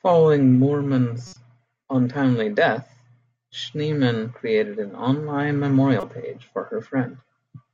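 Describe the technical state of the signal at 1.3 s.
At 1.3 s a corrupt frame decoded fault runs from 1.26 to 1.36 s: damaged bits misplace energy across a few frames, giving a brief chirpy burst, visible as a stray spectral smear.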